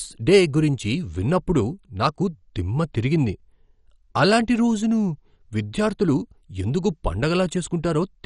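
Speech that sounds dull and plainly gurgling from start to finish, with a granular roughness on the voice and no content at all above 11.3 kHz. These are the marks of MP2 compression, likely from an MPEG Layer II encoder starved of bits, which fits a low rate near 48 kbps. With so little to share among its 32 sub-bands, the encoder drops the top bands entirely and quantises the remaining ones coarsely, while bands flicker on and off.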